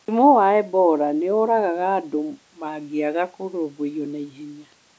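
No faults are present in this speech; the band stopping at 8 kHz is the normal result of the call's microphone processing.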